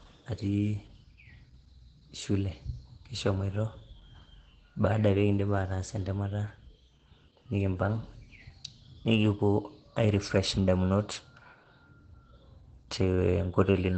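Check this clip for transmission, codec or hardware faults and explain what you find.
There is one codec fault, present throughout the speech. Opus compression, likely in its low-rate speech mode at a bitrate near 12 kbps, cuts everything above 8.6 kHz and leaves the voice muffled and hoarse.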